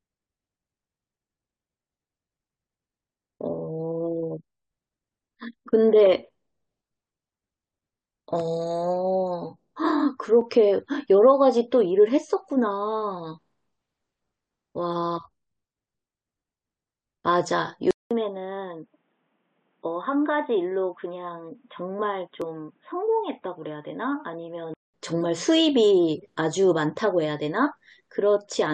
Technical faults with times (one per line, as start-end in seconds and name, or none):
10.41 overlap between stream segments
17.91-24.94 input switched to a poorer device
22.42 overlap between stream segments